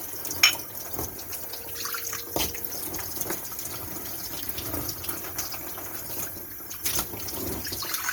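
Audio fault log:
Throughout: generation loss. The sound is swirly, smeared and hollow, with blurred attacks and a watery shimmer beyond what 48 kbit/s Opus alone would give. It was likely re-encoded around five times, each pass quantising on a shifted frame grid so noise accumulates.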